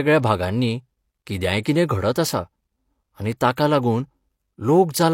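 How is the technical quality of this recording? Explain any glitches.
The recording has three audible glitches: one click and two brief smears ahead of sharp attacks in the speech.

At 1.44 s there is a single sharp click, a thin vertical line across the spectrum. The likely cause is dropped samples: a couple of samples missing from the stream, a gap of only a few hundredths of a millisecond. The waveform jumps straight from one value to a later one. That gap is far too short to remove any sound, but the sudden step in the waveform is heard as a tick.

Pre-echo occurs twice: from 1.63 to 1.65 s, spreading about 25 ms, and from 3.56 to 3.57 s, spreading about 13 ms. A transform codec spreads its quantisation noise evenly across each block. Here a sharp attack falls late in the block, so the noise level meant for the loud onset also covers the quiet stretch before it. This is heard as a short hiss leading into each attack, which then sounds softened and smeared rather than crisp.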